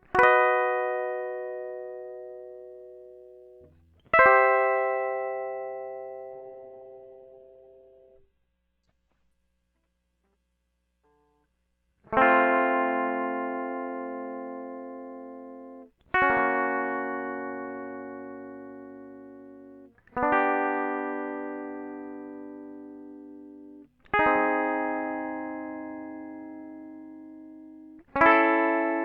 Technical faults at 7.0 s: call bitrate drop

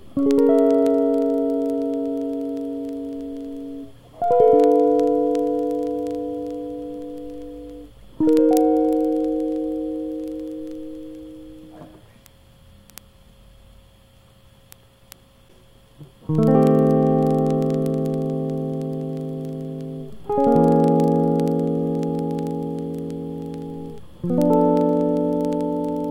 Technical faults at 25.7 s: word clock ticks

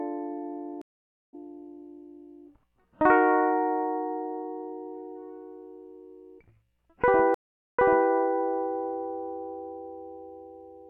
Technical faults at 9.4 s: none

